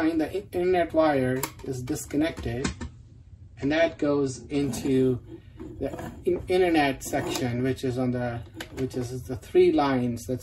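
From 2.60 s to 4.60 s the adaptive stream switched to a lower bitrate, most likely because the connection slowed, and the player fetched a leaner version of the same AAC audio before switching back. The sound turns duller at once, with nothing left above 9.6 kHz, which fits a drop from around 96 to 32 kbit/s. Codec artefacts thicken for those two seconds. Both quality changes are abrupt, with no gap in the audio.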